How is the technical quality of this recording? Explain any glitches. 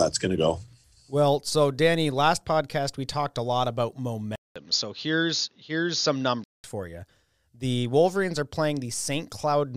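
One glitch in the speech. From 4.36 to 6.64 s the input likely switched to a poorer device. A 200 ms silence, then the sound dulls with nothing above 6.8 kHz and faint new background hiss, though the level holds steady.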